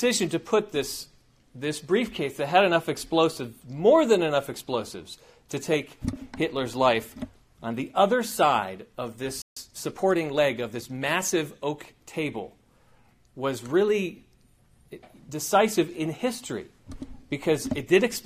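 At 9.42 s the audio drops out in mid-flow and stays silent for about 145 ms, resuming at 9.57 s. This playback stall sounds like the player starving for data, likely from a buffer underrun or a blocked playback thread. From 9.57 s to 11.01 s a time-compressed catch-up follows. The player works off its backlog by splicing out short segments and cross-fading across the gaps, running about 1.1 times faster. Pitch stays unchanged, but the passage sounds hurried.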